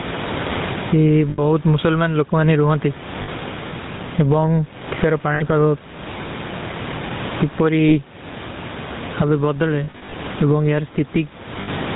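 From the start and through the whole recording, the speech carries the buzzy, gravelly roughness of the GSM full-rate codec, and nothing is heard above 4 kHz. The coder rebuilds the voice from a vocal-tract model driven by evenly spaced pulses, keeping only a thinned-out excitation, which fits a 13 kbps full-rate stream. The damage is plainly audible. What sets it apart from a merely band-limited phone line is the grainy, rasping texture inside the voice itself, not just the missing treble.

Also running throughout is gain pumping, likely from a gain set far too high with a fast limiter clamping it down. The gain swings by roughly 20 dB. The room noise is part of the recording and sits about 30 dB below the speech. A steady noise floor would stay put, but a level swing like this points to gain control rather than the room.

Lost GSM frames occur at 1.3 s (80 ms), 3.22 s (60 ms), 5.34 s (60 ms), 7.88 s (40 ms), 9.84 to 10.14 s (short runs of about 40 ms scattered across 280 ms), and 11.62 s (60 ms). 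The decoder repeats the last good frame's settings at falling level, so each loss is heard as a brief rough, metallic ring, not a silent dropout or a click. The 9.84 s cluster sounds like a stuttering patch of that ring.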